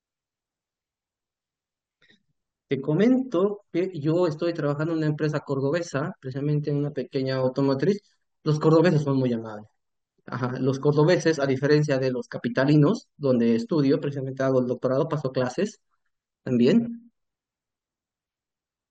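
No technical faults can be heard in the speech recording at any point, so there is nothing to place on the timeline.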